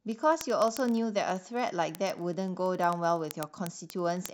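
Sharp, uneven ticks about every 30 ms from 0.12 to 4.32 s are word clock ticks: an unlocked receiver slips a sample as clocks drift roughly 700 ppm.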